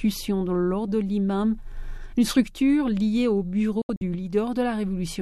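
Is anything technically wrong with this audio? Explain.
Yes. There is a digital broadcast dropout from 3.82 to 4.02 s. The receiver stopped getting usable frames and muted its output until clean ones arrived. The sound drops to silence through a very fast fade of about 3 ms. It breaks into several short holes totalling 120 ms across a 192 ms stretch. The longest hole lasts 72 ms. That pattern fits five lost frames of roughly 24 ms each. The missing audio is gone, not delayed.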